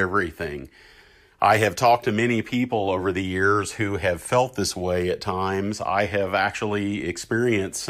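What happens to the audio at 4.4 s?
Nothing goes wrong at 4.4 s; the speech there plays through intact, with no dropout, click, distortion or other fault.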